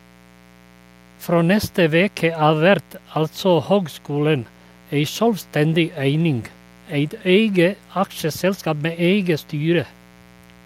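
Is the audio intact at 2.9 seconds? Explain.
No. At 2.9 seconds, as throughout the clip, there is mains buzz: switching spikes at twice the 60 Hz mains rate leak into the speech, spraying harmonics up to several kHz. It sits roughly 30 dB below the speech as a steady, raspy buzz.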